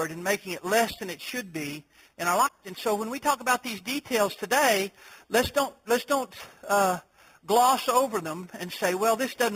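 A bright, metallic fizz rides on top of the sound for the whole clip, rising and falling with its level, with a band of mirrored content sitting between 4 kHz and 8 kHz at about 13 dB below the main signal. This is imaging from sample-and-hold upsampling: each sample was simply repeated to raise the rate, which fits an 8 kHz source lifted to 48 kHz, and with no smoothing filter the spectrum folds back around multiples of the old rate.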